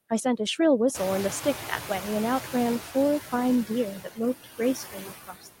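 Across the whole speech clip, the background sinks between phrases and swells back under them, a noise suppressor artifact. The suppressor pulls down bands it judges to be steady noise by about 13 dB, frame by frame.

From 0.94 to 2.81 s, the noise suppressor is catching up. The room noise jumps by about 24 dB at roughly 1 s and settles about 11 dB below the speech. At first it comes through with only about 6 dB of reduction, then fades as the suppressor's noise estimate takes 1.87 s to adapt.

Between 4.04 and 4.2 s, the noise suppressor cuts speech: for about a tenth of a second, sound drops by up to about 19 dB and seems swallowed. From 4.44 s to the end, speech is cut again, dipping as deep as about 22 dB. In both spots the suppressor mistook parts of the speech for noise and turned them down with the background.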